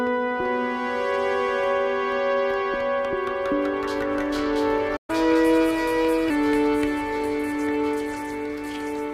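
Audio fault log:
4.96–5.10 s, playback stall: the sound halts mid-flow and the output falls silent for about 120 ms, then resumes from where it stopped rather than jumping ahead. The likely cause is the player running short of data or its thread being held up briefly. Unlike a dropout, nothing is missing from the sound: it pauses intact and carries on, and the gap is followed at once by the sped-up stretch below.
5.10–6.30 s, catch-up at higher speed: straight after the gap the audio runs at 1.1 times normal speed for 1.2 seconds, lifting the pitch by about one and a half semitones, then settles back to normal. Replaying the backlog faster by resampling wins back the time lost in the silence, and because speed and pitch rise together, the sound is both quicker and higher. A plain pitch shift would leave the tempo unchanged and would not start immediately after a gap.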